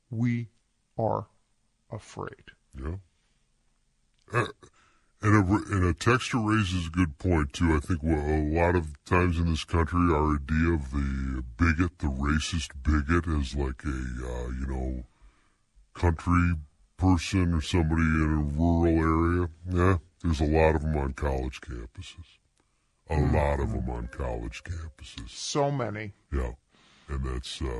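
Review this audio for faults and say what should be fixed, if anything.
Wrong sample rate throughout: the speech runs at 0.726 times normal speed and about 5.55 semitones low, which fits 44.1 kHz audio played at 32 kHz. On a spectrogram, harmonics sit lower and syllables stretch wider. Prevent it by reading the file's stated rate and resampling when the device runs at a different one.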